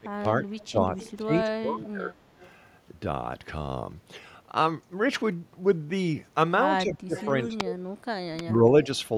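The echo canceller likely could not separate the talker from loudspeaker echo during double talk, so speech is suppressed in double talk from 0.0 to 2.14 s, dipping up to about 25 dB, then again at 6.78–7.56 s and 8.42–8.88 s (about 20 dB). Residual loudspeaker echo likely slipped past cancellation, producing echo leak: copies delayed 223 ms at 1.0, 2.41, 7.17 and 7.66 s, the last only about 10 dB below the speech.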